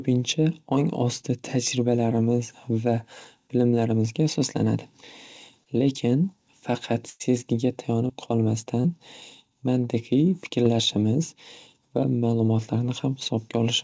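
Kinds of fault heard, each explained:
Short concealed packet loss: Five times, about 20 to 40 ms of speech arrived too late. The decoder extended the previous sound, leaving brief smears or wobbles.
Burst of packet loss: At 7.10 s, about 100 ms was lost in a row. The last sound is held and fades, then speech resumes further on.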